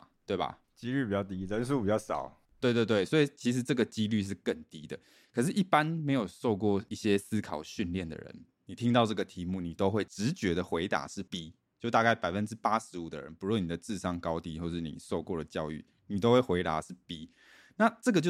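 No technical faults are audible.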